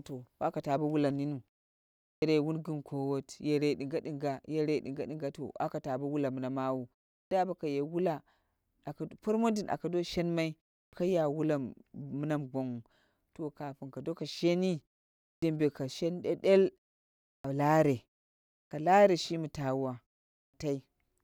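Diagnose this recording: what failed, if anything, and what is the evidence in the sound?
Speech re-enters abruptly after short pauses, with its onset missing, at 2.13, 7.22, 10.83, 15.32, 17.34, 18.62 and 20.44 s. That is a clipped start after a pause at playback. After 0.3 to 0.7 s of silence, the output device sleeps and needs 90 to 105 ms to wake, swallowing each onset.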